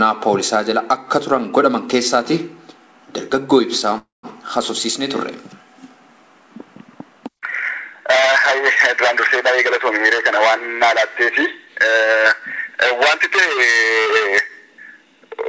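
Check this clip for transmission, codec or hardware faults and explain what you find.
Two faults stand out: a short freeze and a brief speed-up, both heard through a wideband call path whose sound stops at 8 kHz, which fits G.722.

From 3.98 to 4.26 s there is a call audio freeze, likely caused by late packets draining the jitter buffer. The last sound carries on for a while and then goes silent for about 170 ms, and the audio resumes where it left off. Unlike a dropout, nothing is lost.

From 10.40 to 11.26 s comes a jitter buffer speed-up. Pitch-period slices totalling about 40 ms are removed, so the audio runs at 103% with unchanged pitch. It does not sound chipmunk-like.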